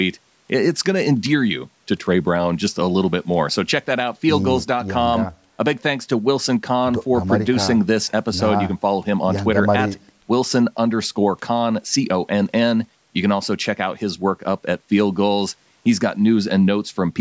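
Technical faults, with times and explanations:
No technical fault can be heard; the speech has passed through a call's microphone processing, whose high-pass filter trims the lowest bass as intended, and it carries nothing above 8 kHz.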